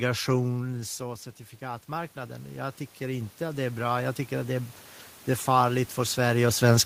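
From 1.58 s to 4.78 s the automatic gain rising fault is audible. The input level had fallen by about 11 dB, so the automatic gain control slowly raised its gain by about 11 dB over roughly three seconds to compensate. The speech and the room noise swell up together. That is what separates it from the talker moving, heard near half a second and again around 6 s, where only the voice changes level and the background stays put.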